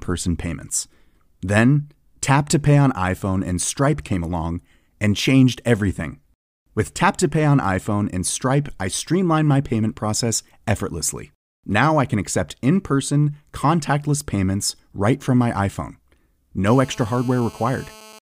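From 16.67 s to 18.19 s, GSM phone buzz sits under the speech: a hard, raspy tone at 217 Hz, about 24 dB below the speech level and steady throughout. A nearby 2G handset on a call was transmitting in regular bursts, and the audio circuitry rectified those radio pulses. On a spectrogram it shows as evenly spaced horizontal lines at 217 Hz and its many harmonics, while the waveform carries a regular pulse train.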